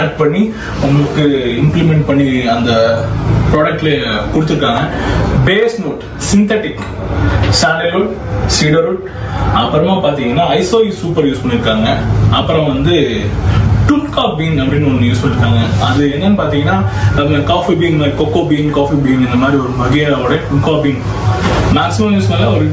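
Gain pumping runs from start to finish, most likely because the input gain was set far too high and a fast limiter or compressor keeps hauling it back down on every loud sound. The level swings by around 20 dB as a result, so quiet and loud passages sit unnaturally close together and the audio feels squashed. The call microphone processing beneath it caps the top end at 8 kHz.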